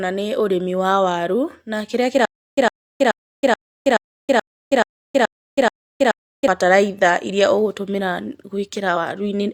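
Right after "wa waru na kĩrĩa", from 2.25 to 6.48 s, you get a stutter with silent gaps: a 107 ms burst repeats nine times, each followed by about 322 ms of dead digital silence, so roughly every 0.43 s. The likely cause is a stalled player replaying its last fragment on each retry, and the audio meant for that stretch is simply gone.

Then at 8.92 to 8.97 s there's a brief glitch, the signature of damaged data in a compressed stream. The decoder hit corrupted frames, lost sync and skipped ahead to the next valid header, so the sound glitches.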